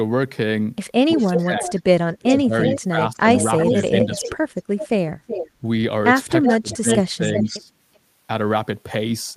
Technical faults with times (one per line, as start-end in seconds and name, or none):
1.14-4.45 speech suppressed in double talk
1.20-5.50 echo leak
6.43-7.99 echo leak
6.48-7.72 speech suppressed in double talk